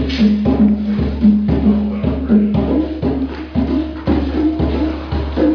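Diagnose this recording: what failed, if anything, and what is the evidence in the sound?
Nothing failed in this recording; there is no audible evidence of a fault at any stage.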